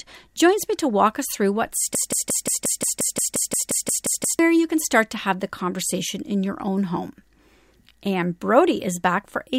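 A stalled player or stream likely kept resending its last buffer: from 1.95 to 4.39 s, after "walk us through what", a 176 ms fragment repeats 14 times in a broken-record loop before "you can start to".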